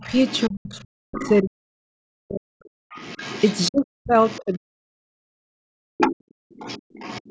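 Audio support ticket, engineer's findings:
Other side's voice leaking through: residual echo, likely from loudspeaker playback the echo canceller did not fully remove from the mic path. Second voice audible under the speech at 0.0 to 1.31 s and 2.65 to 3.69 s, about 15 and 20 dB below the talker, plus a short scrap at 4.22 to 4.57 s, about 20 dB down. Strongest at 5.97 to 7.3 s, only about 10 dB below.

Speech suppressed in double talk: echo canceller likely unable to separate near-end talk from echo while both sides spoke, so it attenuated everything. Talker's level dips and drops out in pieces from 0.49 to 2.63 s and again from 3.69 to 5.71 s, roughly one and a half seconds affected in each stretch. Deepest cuts reach about 40 dB, so the voice effectively vanishes in places.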